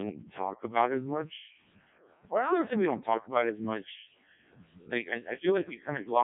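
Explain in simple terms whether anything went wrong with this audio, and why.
From start to finish the speech sounds robotic and buzzy, as if a machine were imitating a person, and it is heavily damaged. It is also muffled, with nothing above about 3.7 kHz. The cause is the Codec 2 vocoder, a radio voice codec. It does not keep the actual sound wave. It sends only a rough outline (pitch, loudness and tone colour) and then rebuilds the voice from simple tones, so natural detail is lost.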